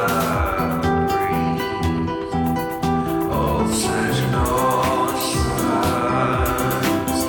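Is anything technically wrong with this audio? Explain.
No, nothing technically wrong can be heard in this music clip. There is no fault to report anywhere in it.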